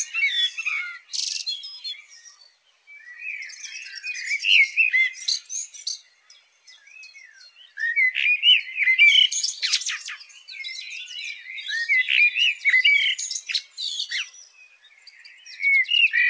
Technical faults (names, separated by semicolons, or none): none